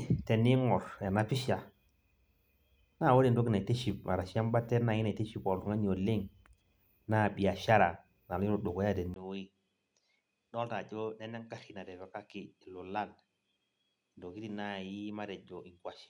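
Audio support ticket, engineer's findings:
Speech turns duller and quieter from 9.14 s to the end, after a 20 ms gap at the switch. Nothing above 11.4 kHz. Level down about 10 dB. New background noise roughly 50 dB below the speech. Likely an input switched to a poorer device.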